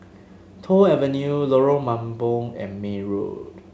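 No technical faults occur at any point in this speech, so there is nothing to describe in time order.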